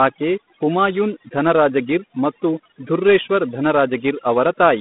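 From start to finish, the speech carries overdone noise removal. A noise reducer was pushed too hard. It cut each frequency band whenever that band sat near its idea of the noise floor. Quiet parts of the voice fell below that line and vanished with the noise. The gaps between phrases drop to near silence, dotted with small twinkling specks.

Also throughout, the sound is G.726 ADPCM coding, the telephone kind. Each sample is stored as a few bits describing its difference from a running prediction. Too few bits leave a large error. Here that error is plainly audible as a harsh, rasping hiss. The hiss rises and falls with the speech level. Its coarseness fits a rate of 24 kbit/s. The band runs from about 150 Hz to 3.6 kHz. Nothing passes above 3.8 kHz.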